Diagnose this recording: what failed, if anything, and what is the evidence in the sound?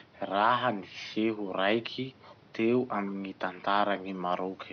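Nothing in the signal chain has failed: the speech sits steadily above a low bed of room noise about 28 dB down, which belongs to the recording space rather than to any stage of the system.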